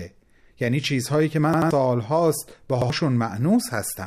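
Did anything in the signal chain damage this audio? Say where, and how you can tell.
Yes, at the driver or buffer stage. Each repeat is about 85 ms long, which fits a 4096-sample buffer. From 1.54 to 1.71 s the same slice of speech plays three times in a row, with a hard join at each restart. From 2.82 to 2.90 s one slice plays twice. This is a repeated buffer. Fresh audio arrived late, so the device replayed its last block. The first stutter drops roughly 150 ms of speech, the second roughly 100 ms.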